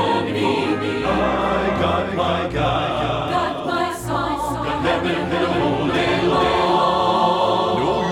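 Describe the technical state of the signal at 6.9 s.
At 6.9 s the doubled audio track is present, as it is throughout: a full-band copy trails about half a second behind, roughly 5 dB quieter, most likely from a second, slower capture path. A waveform or spectrogram shows every event repeated, undecayed, half a second later.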